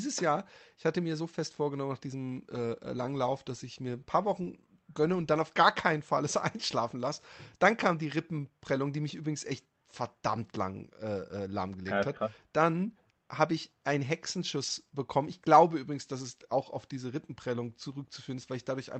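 The sender's audio clock runs faster than the receiver's, by roughly 4 percent, so this speech recording suffers clock drift between sender and receiver for its whole length. Samples arrive more quickly than the receiver plays them out, and its jitter buffer keeps filling rather than settling. Nothing fails outright. The excess simply builds up steadily, leaving the receiver to deal with it continuously across the call. To keep the buffer from overflowing, the receiver makes repeated timing corrections from 0.07 s to 18.78 s. It trims short slices out of the stream, always in the same direction, at uneven intervals, and this works out to playback running at about 104 percent of normal speed. Each cut is small, so it comes across as faint hiccups and a slightly hurried, unsteady pace. Over the call path the Opus coding holds the top end at 8 kHz, consistent with a moderate call bitrate.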